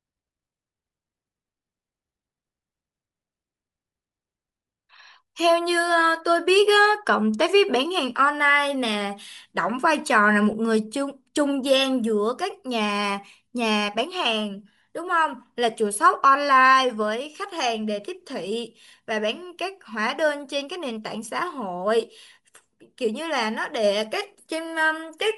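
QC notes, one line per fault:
throughout: Bluetooth LC3 compression. The speech was likely carried over LE Audio's LC3 transform codec at a modest rate, consistent with about 48 kbps in 10 ms frames, which discards much upper-spectrum detail and substitutes noise, leaving consonants and vowels plainly breathy and grainy.
10.52 s: lost LE Audio frames. A brief dropout of about 10 ms, consistent with a single missing frame, was concealed by the decoder replaying the previous spectrum with randomised signs, so the moment comes through as a short noisy smear.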